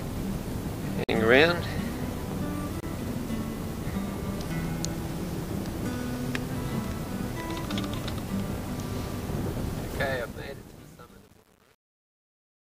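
At 1.04 s the sound drops to silence for 48 ms, and at 2.80 s it does so again for 28 ms, each time resuming where it left off. These gaps are likely Bluetooth stalls: packets delayed by interference let the headphones' buffer empty, so playback halted until the retransmitted data caught up. The cut-outs are clean holes rather than crackles, short enough to read as brief stutters in the flow.

From 10.02 s to the end at 12.61 s, the fade-out that begins around 10 s carries truncation distortion on a fade. The gain stage is keeping too few bits without dither, and the grit points to roughly 9-bit resolution. As the level falls toward the smallest step, the waveform collapses into coarse steps. From 10.04 s onward the tail turns rough and granular rather than thinning away smoothly.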